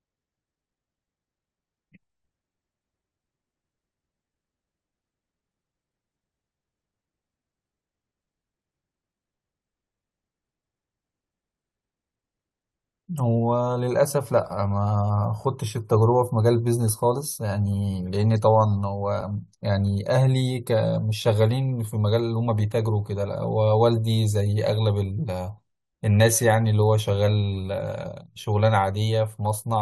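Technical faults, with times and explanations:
19.21 s, gap between stream segments: a brief hard-edged dropout of about 6 ms cuts into the speech, a tiny click-like hole rather than a fade. It comes from two consecutive stream segments whose timestamps don't quite meet, so the player fills the missing stretch with silence; with 6-second segments this falls at a boundary. Nothing is lost from the recording, but about 6.2 ms is added, delaying everything after it slightly.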